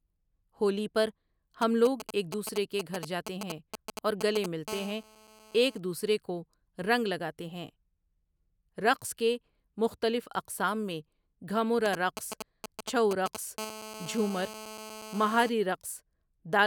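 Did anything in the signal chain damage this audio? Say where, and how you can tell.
Yes. GSM signalling bursts enter the analogue wiring from 1.62 to 4.68 s and again from 11.86 to 13.59 s: a galloping dit-dit-dit of short 217 Hz buzzes, nearly as loud as the speech. A nearby 2G phone's sparse radio bursts are being rectified by the audio circuit.

GSM phone buzz follows directly, from 4.68 to 5.78 s at about 17 dB below the speech and from 13.59 to 15.49 s at about 13 dB below. It is a steady, raspy 217 Hz tone rich in harmonics, unrelated to the speech. The phone is now in a call, transmitting bursts 217 times a second, and the analogue stage demodulates that pulse train.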